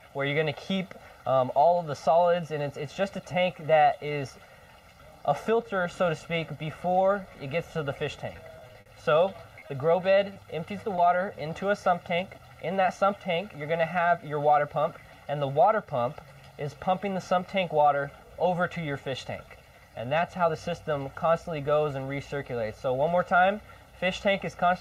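Right from the start there's a channel delay causing comb filtering. One side arrives roughly a millisecond and a half late, and once the two are folded to mono, the shared content cancels at evenly spaced frequencies, with the first dip somewhere around 300 Hz. That leaves the whole clip sounding hollow and a bit phasey, with a fixed coloration that never moves.

From 8.32 to 8.88 s you get repeated packet loss, and it's the robotic sound you'd expect. Roughly half a dozen holes land in just over half a second, the longest about 50 ms. Each one gets patched by stretching the last bit of sound before the next hole hits, so about a fifth of that stretch is synthetic fill. It comes across choppy, with little pieces missing.

After that there's a run of short concealed packet loss, each a 20 ms dropout at 9.60, 9.68, 10.34 and 10.96 s. In every case the receiver covered the gap by carrying the preceding sound forward, either from its pitch or as shaped noise, and then blending back into the real signal. 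You hear them as brief smears or wobbles, and anything very short that fell inside a gap can simply vanish.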